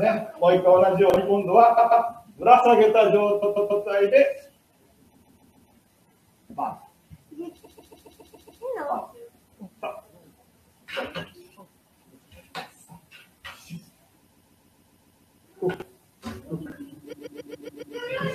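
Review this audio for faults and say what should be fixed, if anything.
Chunks out of order: 20 ms chunks were written two or three slots late at 1.10, 15.74 and 16.66 s, producing brief jumbled moments.

Repeated frames: a 139.3 ms block was resent two to eight times at 1.77, 3.42, 5.13, 7.64, 14.31 and 17.12 s, heard as stutters that lengthen the audio.

To prevent both, sequence-number each chunk and frame so the writer reorders late arrivals and discards duplicates before decoding.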